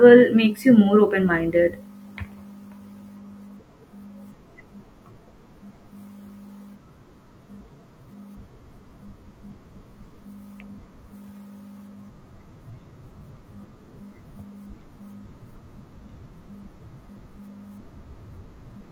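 Speech recording with no technical faults to report.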